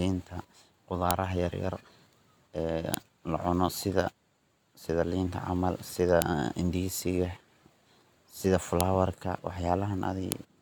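At 1.11 s a sharp, loud click cuts through the speech. The same snap returns at 2.94 s, just before "la cuno", then at 6.22 s, 8.81 s and 10.32 s. Each is a file header played as audio. Separate WAV pieces were joined without stripping their headers. Those few dozen bytes of metadata were read as sample values. Each one lasts only a moment. It is heard as a hard snap at every join, regardless of the speech around it.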